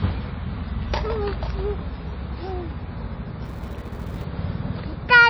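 Across the whole clip the sound is muffled and watery, with weak detail flickering in and out, plainly audible damage that is likely MP3 compression at a low bitrate around 24 kbps. A spectrogram shows a hard ceiling and patchy, blocky upper bands.

From 3.45 to 4.25 s a filter restarted on every block adds a 375 Hz buzz that rises and falls with the level, which fits a 128-sample buffer. Each block starts from silence, and the waveform shows evenly spaced ticks that appear as vertical striations on a spectrogram.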